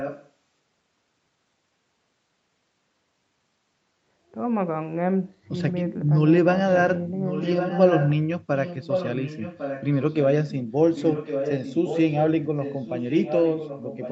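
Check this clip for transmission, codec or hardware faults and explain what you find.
One fault is present: an echo leak. At 0.0–0.3, 7.26–8.2, 8.55–10.26, 10.44–10.53, 10.94–12.21 and 12.6 s to the end, a fainter copy of the speech follows about 1.1 s behind, at moments nearly as loud as the original. The likely cause is a loudspeaker on the far side whose echo canceller failed to remove what its microphone picked up, sending it back down the call.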